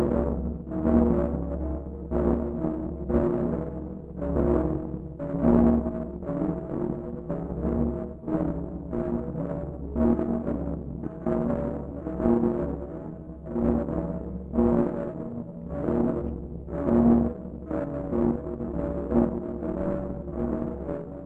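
A recording of everyday sounds, with no technical fault to be heard anywhere in it. Nothing in the audio calls for a time, a cause or a repair.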